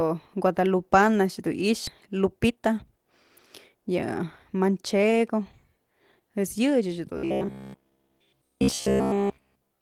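Speech with three kinds of fault. At 1.87 to 1.89 s there is a skip ahead. Roughly 0.7 s of audio is gone. The two sides join with no gap. The jump happened because audio was dropped while later audio was already waiting.

Jitter buffer speed-up follows in two stretches. From 2.06 to 3.06 s the speech runs at 114% speed, losing about 150 ms. From 3.74 to 5.03 s it runs at 105%, losing about 70 ms. Pitch stays the same. The receiver cut short pitch-period pieces to shed excess buffered delay.

From 7.17 s to the end, the speech becomes a rigid, metallic buzz near 66.7 Hz. It loosely follows the speech. This is robotic sound from repeated short buffers. Its likely cause is audio arriving too seldom, so a block of about 15 ms was replayed over and over in place of the real signal.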